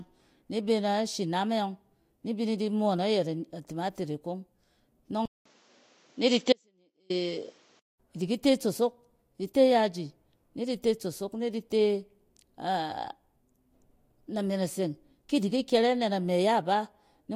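At 5.26 s the speech goes dull and boxy after a brief silence of about 200 ms, with nothing above 8 kHz, a level shift of roughly 5 dB and a new noise floor around 40 dB down, until 8.0 s. This is likely an input switched to a poorer device.

Within that stretch, from 6.53 to 7.10 s, the speech abruptly cuts out for about 0.57 s, leaving only a faint trace roughly 35 dB below normal level. This is likely an audio dropout to a faint residue, with the path after the break still live.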